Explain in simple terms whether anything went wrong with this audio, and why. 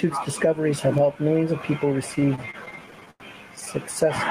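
Two things went wrong. First, there is gain pumping throughout. The likely cause is a microphone level set far too high, so an automatic limiter keeps grabbing the volume and pulling it down whenever the speech gets loud, then letting it back up in the pauses. The whole recording sounds squashed, with loud and quiet parts pressed unnaturally close together.

Second, from 2.15 s to 3.69 s, right after "helped millions of people", there are repeated stalls (stutter). The audio data arrived late or too slowly, so the receiving end kept running out and had to pause. During about 1.5 seconds it stalled 18 times, each time stretching the last bit of sound to cover the wait, the longest about 93 ms. Nothing is actually lost, but the speech drags and stutters there.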